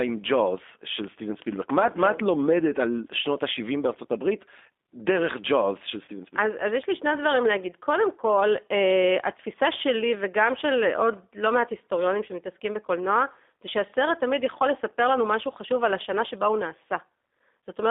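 G.729 codec, throughout the clip: the speech is rebuilt from a modelled vocal tract filter, a pitch predictor and a handful of pulses per frame, which fits a rate of about 8 kbit/s. The band runs only from 250 Hz to 3.6 kHz, and the codec damage is plainly audible as a rough, synthetic edge.

VoIP packet loss concealed by the speech codec, from 6.05 to 6.09 s: about 30 ms of audio went missing. The decoder extrapolated from its last pitch and filter state at fading gain, so the sound smears into a brief, weakened stretch before recovering.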